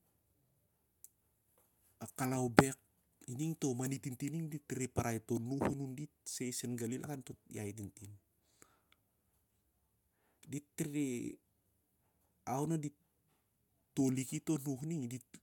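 Nothing here trips the ear; the speech just runs along without any dropouts, clicks, glitches or other faults worth pointing to.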